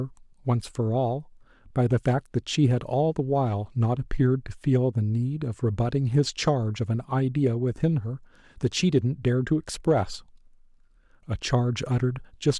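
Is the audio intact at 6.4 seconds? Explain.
No, 6.4 s falls within hard clipping from 6.18 to 6.49 s. Peaks overdriven by about 1 dB are cut flat, giving crackle, flat-topped waveform peaks and high-frequency harmonic smears.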